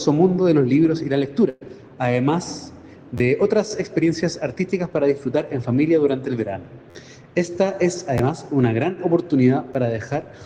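A burst of packet loss runs from 1.49 to 1.63 s. The receiver fills about 116 ms by extending and fading the last received sound into a held buzz or hiss, then resumes with roughly 120 ms of the original audio missing.

Repeated buffers follow at 3.18–3.20 s, 6.90–6.95 s, 8.18 s and 9.74 s, where late audio makes the device replay an 11.6 ms block, which fits a 512-sample buffer. The block replays two, four, one and one extra times, each with a hard join, heard as clicks or brief buzzes. The longest stutter, at 6.90 s, drops roughly 50 ms of audio.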